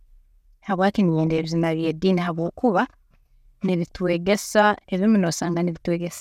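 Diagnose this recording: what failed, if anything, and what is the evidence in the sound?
Weak DAB reception broke through into the MP2 decode, giving classic DAB burbling: burbling from 1.24 to 1.50 s just before "by'ediini habwokuba", and again briefly at 3.91 s. Bit errors, at a fraction of a percent, slipped past error correction, corrupting samples so short blips of noise appeared in single sub-bands.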